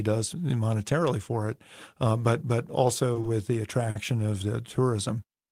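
In this speech recording, the sound briefly hangs in place three times: right after "uh but but also" at 3.13–3.18 s and again at 3.21–3.26 s, and then at 3.90–3.98 s. Each time, a sound is held a little too long, with a faint buzz or dip, before the speech carries on. These are short stalls from a late packet. The jitter buffer ran dry, and the receiver stretched the last sound by about 20 ms, 20 ms and 50 ms until the packet arrived. No speech is lost, but each stall pushes the playback later by the same amount.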